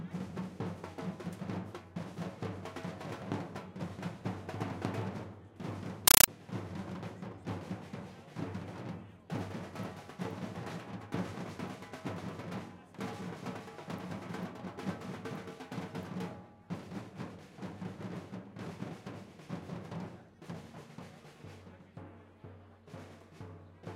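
A recording of everyday sounds, interrupted from 6.08 to 6.28 s by a compressed stream played as audio: undecoded AC-3 data, likely a 384 kbps stream, reproduced as raw samples. Unlike steady hiss or clipping, it chatters as 8 ms noise bursts separated by silent padding, 31.25 times a second.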